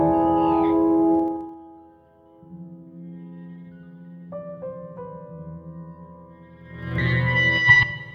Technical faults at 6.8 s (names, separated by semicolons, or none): zipper noise